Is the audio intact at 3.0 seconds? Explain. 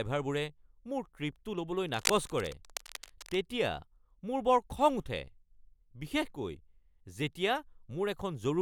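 No. From 1.87 to 3.45 s, just after "ট্ৰিপটো ল’বলৈ", cable scratch noise, likely from a worn cable or connector being moved, lays a dense, uneven scratching rustle over the speech, fairly loud at around 10 dB below it. Unlike isolated clicks, it forms dense, uneven bursts.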